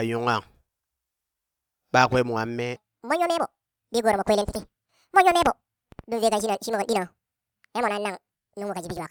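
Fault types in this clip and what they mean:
Section at the wrong speed: from 2.76 s to the end, the audio is likely being played against the wrong clock, running 1.74 times faster than it was recorded. Speed and pitch move together in this kind of playback, and the change is abrupt rather than gradual. The speech suddenly turns hurried and rises by roughly ten semitones, taking on a thin, chipmunk-like quality that lasts through the rest of the clip.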